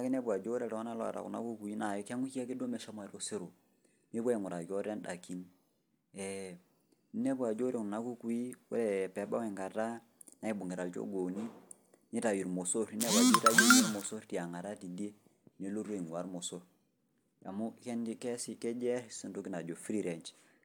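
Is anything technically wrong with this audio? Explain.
No, no technical faults heard.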